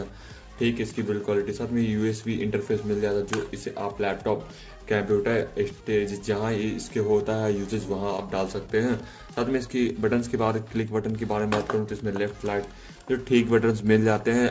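At 8.17 to 8.19 s there is a short concealed packet loss: about 20 ms of the call audio failed to arrive at the decoder in time, and the receiver covered the gap by extending the preceding sound for roughly 11 ms before crossfading back into the received signal. It comes across as a brief smear, heard through the call path's G.722 coding, which leaves nothing above 8 kHz.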